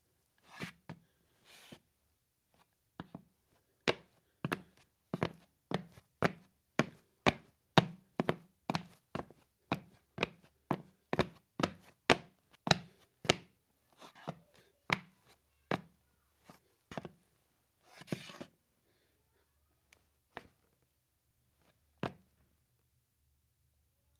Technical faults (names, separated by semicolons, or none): none